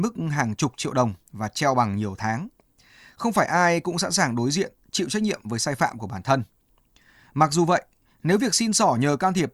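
No technical faults can be heard anywhere in this speech recording.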